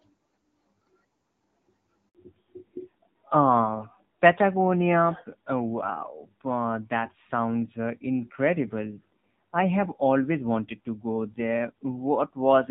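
A speech recording carries a handover gap at 2.09 s, where the call switches networks and no speech frames arrive for about 60 ms. The sound collapses within a few tens of milliseconds and stays silent until the new link picks up at 2.15 s, and whatever was said in that stretch is gone. On a waveform this shows as a short flat line; on a spectrogram it is a narrow, fully blank vertical strip across every frequency. Right after the gap comes a fallback to narrowband that lasts to the end of the clip. Before it, the speech has the light coding texture of HD Voice at a rate consistent with AMR-WB 12.65 kbit/s, with energy reaching well above 4 kHz. From 2.15 s onward nothing survives above 4 kHz, and the voice turns duller and rougher, which fits a drop to AMR-NB at around 7.4 kbit/s. A spectrogram shows the upper band abruptly emptying at that point, leaving a hard horizontal ceiling at 4 kHz for the rest of the recording.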